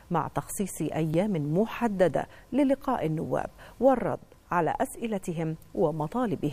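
At 1.14 s the program likely failed to collect a block of samples before the hardware overwrote it, a dropped buffer (overrun). Only a very short stretch is lost, around a millisecond or two, and the audio on either side is joined directly with no gap of silence. The sound skips slightly forward at that instant, where the waveform jumps instead of continuing smoothly.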